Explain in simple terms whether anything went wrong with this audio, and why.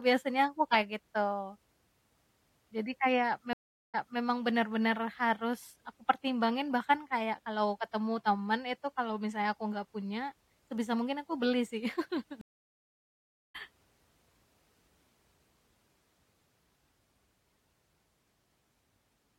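The speech drops out twice. At 3.53 s it goes quiet for about 0.41 s, then picks up a quarter-second before where it stopped, so a short bit repeats. At 12.41 s, right after "mungkin aku beli sih", it goes silent for about 1.1 s and comes back roughly 0.7 s further on, skipping a moment. Both are a stream reconnect: the connection broke, the player restarted mid-stream, and playback resumed at a slightly different point, easing back in.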